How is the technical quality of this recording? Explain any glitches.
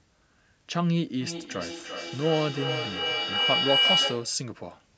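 The recording is marred by one serious fault, a feedback howl that covers most of the speech. From 1.21 to 4.44 s, two devices on the same call in one room formed a loop: the microphone picked up the loudspeaker, and each trip round the loop added gain instead of losing it. The repeats therefore grew and narrowed onto the frequencies the loop favoured. The result is a shrill tone near 3 kHz, pulsing roughly every third of a second, that swells to about 3 dB above the speech.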